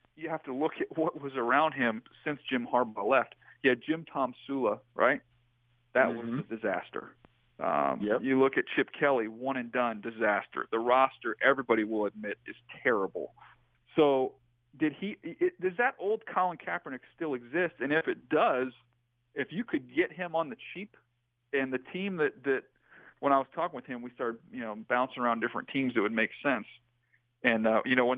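Nothing stood out on listening to this audio.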